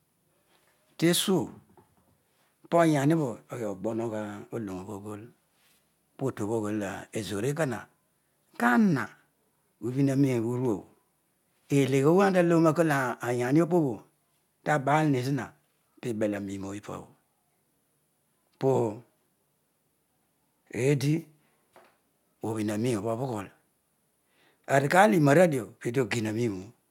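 No technical faults detected.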